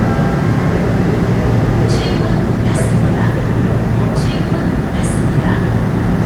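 At 2.16 s a call bitrate drop kicks in and runs to the end. The sound goes coarse and muffled, with the top end shaved off, which fits the encoder falling from roughly 128 kbps to about 20 kbps and sitting there for around 1.3 s.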